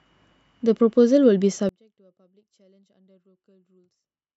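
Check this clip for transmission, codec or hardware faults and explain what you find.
There's one fault worth flagging. From about 1.69 s right through to the end, the speech drops by about 37 dB, leaving only a faint residue of what was there before. That's most likely one channel inverted: one side of the stereo pair has flipped polarity, so when the two are summed to mono the shared centre content cancels out, and all you're left with is the small difference between the channels.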